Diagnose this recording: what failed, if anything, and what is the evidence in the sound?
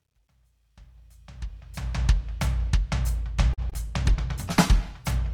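Truncation distortion on a fade, at the start of the music from 0.0 to 2.06 s, worst up to 0.95 s. The fade-in is smooth in shape, but its quiet opening turns gritty. That points to a digital gain stage keeping about 12 bits without dither, so low levels collapse into coarse square steps.

Short stall from a late packet, network and jitter-buffer stage, at 3.53 to 3.60 s. The sound is held for about 42 ms, then resumes where it left off with nothing lost. A packet arrived late, the buffer ran dry, and the receiver stretched the last audio until the packet arrived.

Short concealed packet loss, twice in quick succession at 3.70 to 3.74 s and 3.74 to 3.77 s. Each leaves a brief smear where about 20 ms of audio never reached the decoder. The receiver extrapolated from the preceding sound to cover each gap, then blended back into the real signal.

Call bitrate drop, codec stage, from 3.96 s to the end. 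The music turns rough and watery and loses its top end for about 1.4 s. That fits the encoder being pushed from around 128 kbps down to about 21 kbps after the bandwidth estimate fell, which forces coarser coding and a lower high-frequency cut-off.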